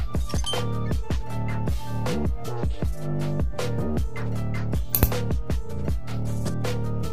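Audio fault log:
throughout, DC offset: the waveform sits shifted from zero by a constant of about -28 dBFS, costing headroom without being heard as such. Unlike rumble or mains hum, the energy lies exactly at 0 Hz, perfectly steady, with no fluctuation or harmonics.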